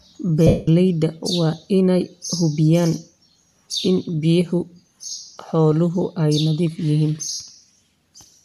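At 0.47 s the speech breaks up for about 0.2 s, until 0.68 s, because of lost LE Audio frames. The LC3 decoder fills the gap by reusing the last received spectrum with randomised signs, so the sound turns into a noisy smear that fades toward silence as the loss goes on. That length fits some 27 missing 7.5 ms frames. A shorter 60 ms loss, 7.34 to 7.40 s, leaves a brief hiss-like smear before the signal returns.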